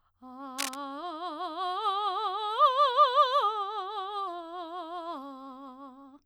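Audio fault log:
0.58–0.75 s, cable scratch noise: a dense, uneven burst of scratchy rustling sits over the music for about 0.17 s, only a little quieter than the music itself. This is likely a worn cable or connector shifting, its contact resistance fluctuating rapidly.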